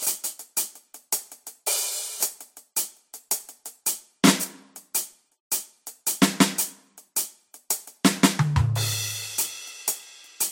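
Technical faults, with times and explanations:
Throughout: transcoding between lossy codecs. The music sounds like it likely passed through MP3 and then Vorbis at around 61 kbit/s. Nothing is present above 16.6 kHz. Smearing and swirly high-frequency artefacts from both encoders stack, because the second codec wastes bits re-encoding the first one's damage.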